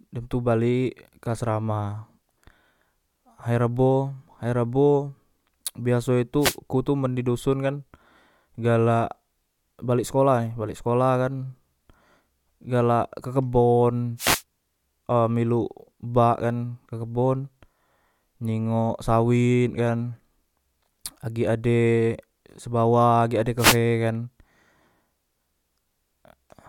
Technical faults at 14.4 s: wireless microphone noise hit

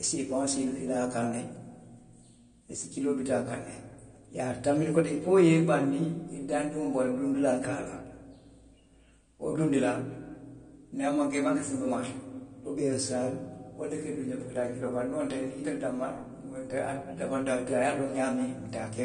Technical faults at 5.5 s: AAC compression

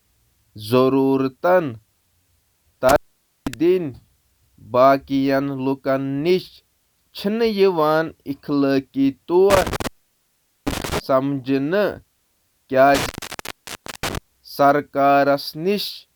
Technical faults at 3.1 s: intermittent contact

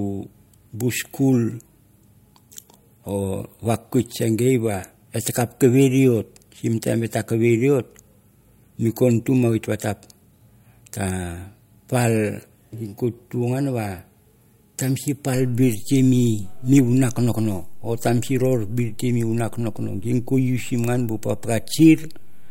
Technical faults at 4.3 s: none

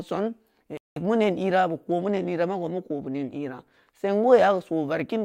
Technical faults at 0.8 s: stream reconnect

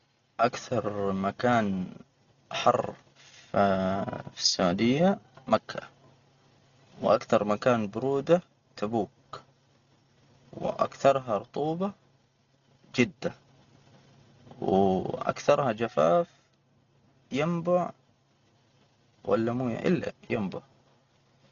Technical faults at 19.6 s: Dolby Digital compression

